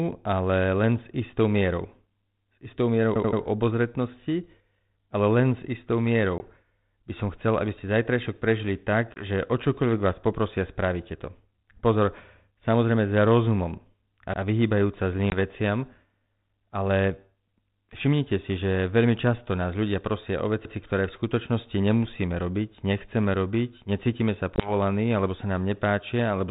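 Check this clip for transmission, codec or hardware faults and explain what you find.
Two kinds of fault are present in the speech: repeated buffers and packet loss on an ADPCM call, heard over a telephone-band link whose coding sounds consistent with G.726 at 32 kbit/s.

Repeated buffer, at 3.16 to 3.41 s and at 14.34 s just after "samozrejme za rozumom a". When fresh audio missed its deadline, the output replayed its previous block. That happened three extra times at 3.16 s and once at 14.34 s. Each copy lasts about 85 ms, which fits a 4096-sample buffer, and nothing is skipped. The result is a choppy stutter. On a waveform the identical segments sit side by side with abrupt joins, and a spectrogram shows the same pattern copied with vertical seams.

Packet loss on an ADPCM call, at 6.38 s, at 9.14 s after "aby ste zajtrajšok prežili", at 15.30 s after "za rozumom a vyhýbajúca", and at 24.56 s. 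Each time a single packet of about 20 ms vanished and was filled with silence. Because the decoder's prediction and step size then disagree with the sender's, speech resumes slightly distorted for a brief stretch. The waveform shows a flat gap with sharp edges followed by a misshapen stretch. The spectrogram shows a blank slot.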